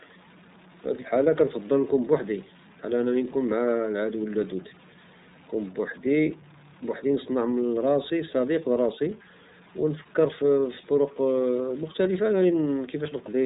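A stuck bit runs from start to end of the speech: distortion rides on the signal, and the pauses fill with a steady hiss-like noise instead of going quiet. This is likely one data bit held at a fixed value by a faulty line or converter, so roughly half the samples are pushed off by that bit's weight in a pattern that follows the waveform, and small values near silence are hit whenever their sign changes.

The iLBC codec also affects the whole clip. Nothing passes above about 3.8 kHz, which leaves the speech narrowband and dull, and the damage is plainly audible as a rough, slightly synthetic grain. The codec handles each 30 ms frame's excitation on its own, without drawing on the frame before, and this frame length fits its 13.33 kbps mode. That independent, frame-by-frame coding gives the speech its coarse, artificial texture.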